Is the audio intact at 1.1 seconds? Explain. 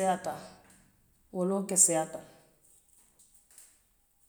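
Yes, the speech plays through 1.1 seconds cleanly, with no dropout, click, distortion or other fault at that moment.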